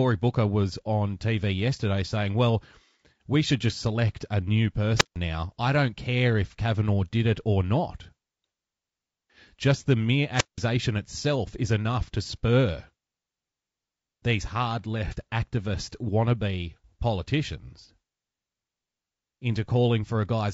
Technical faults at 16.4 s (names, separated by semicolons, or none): low-delay AAC compression